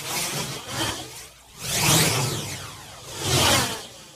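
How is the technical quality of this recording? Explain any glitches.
There's one glitch: frames out of order from 0.80 to 0.90 s. Two neighbouring 46 ms blocks, each sounding like about two frames, swapped places, so that stretch flutters.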